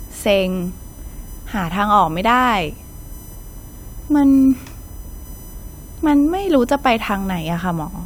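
A speech recording with USB whine running under it from start to finish. A fixed-pitch tone sits on a 1 kHz fundamental with a comb of harmonics, the strongest at 14 kHz, around 25 dB below the speech. The 1 ms frame rate of the USB bus is likely leaking into the audio through shared power or ground. A spectrogram shows evenly spaced horizontal lines every 1 kHz, brightest at 14 kHz, continuing through the pauses, where the waveform never drops to silence.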